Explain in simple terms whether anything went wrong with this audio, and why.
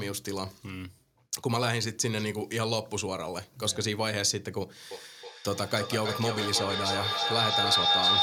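Feedback howl from 4.91 s to the end: a shrill, high whistle pulsing about three times a second grows louder instead of fading like an echo.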